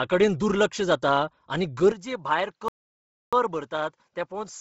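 Speech with heavy coding damage throughout: a breathy, grainy upper band, likely from Bluetooth LC3 compression at a low bitrate with 7.5 ms frames. At 1.92 s the sound drops about 5 dB and turns duller with no gap, pointing to an input switched to a poorer device, with faint added noise roughly 55 dB down. From 2.68 to 3.33 s the audio stops dead for 642 ms before resuming, likely a playback stall where the player ran short of data.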